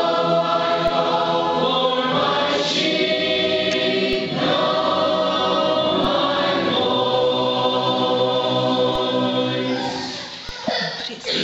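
DC steps at 0.88, 4.13, 6.05, 8.95 and 10.49 s, each a sudden zero-line jump of about -19 dBFS that decays through a 20 Hz high-pass and is heard as a low thump.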